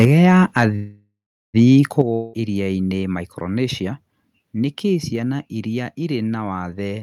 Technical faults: microphone overload; microphone volume stepped down; call audio freeze; long network dropout

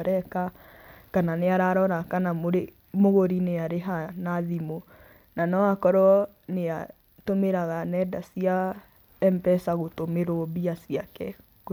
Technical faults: none

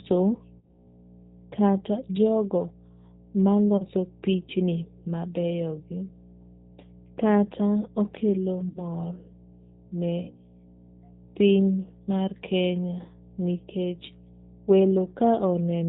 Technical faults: mains hum; G.729 codec

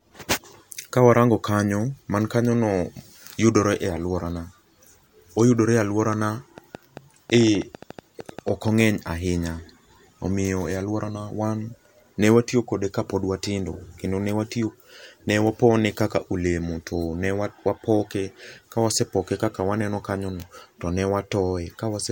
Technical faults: train of clicks

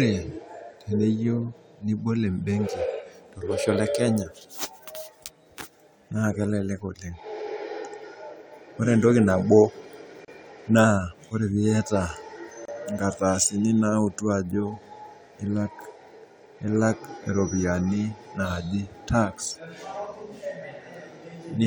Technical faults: gap at a join of encoded pieces

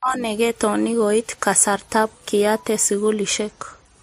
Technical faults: transcoding between lossy codecs

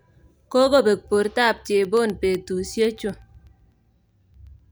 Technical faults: periodic USB or driver dropouts

